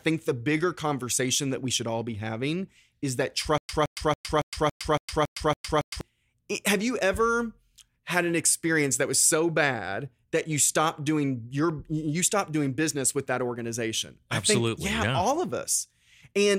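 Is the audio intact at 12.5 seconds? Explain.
Yes, at 12.5 seconds the audio is intact, with no dropout, glitch or other fault at that point.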